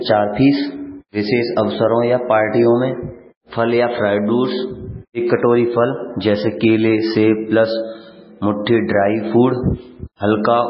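Throughout the speech, everything above 5.5 kHz is missing and the sound turns watery and swirly, which points to heavy MP3 compression, likely at a very low bitrate around 16 kbps. Starved of bits, the encoder drops weak frequency lines that flicker from frame to frame. A spectrogram would show a hard ceiling at 5.5 kHz and speckled, patchy energy below it.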